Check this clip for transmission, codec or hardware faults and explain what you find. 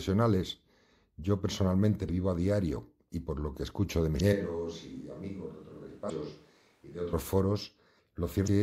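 Two kinds of fault are audible: repeated damaged data in the compressed stream, and a stretch that sounds like a switch to a distant microphone.

Damaged data in a compressed stream appears four times: 2.05 to 2.09 s, between "yo personalmente" and "vivo a diario y"; 4.17 to 4.21 s, just after "lo que escucho de"; 6.06 to 6.10 s; and 8.44 to 8.49 s. Each lasts about 40 to 50 ms. Corrupted bytes make the decoder misread its frames, lose sync and hunt for the next valid header. The result is a short chirp or blip.

From 4.33 to 7.13 s the speech becomes abruptly hollow and roomy, with thinner bass. The level drops by about 5 dB, and room noise rises to roughly 35 dB below the speech. Both the change into this sound and the return are sudden. The likely cause is a switch to a distant microphone: the close microphone's feed dropped out, and a more remote pickup, such as a camera microphone, filled in until the close signal returned.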